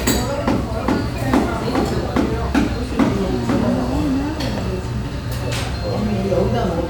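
No technical faults can be heard anywhere in this recording.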